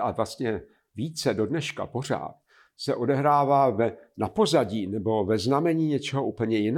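No technical faults are audible.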